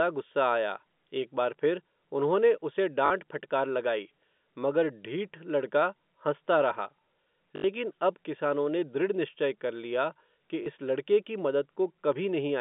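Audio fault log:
3.06, 7.56 and 10.64 s, packet loss with last packet repeated: gaps of 40, 80 and 20 ms replay the previous chunk, giving a 50 Hz robotic stutter in the first two and a small blip at 10.64 s rather than silence.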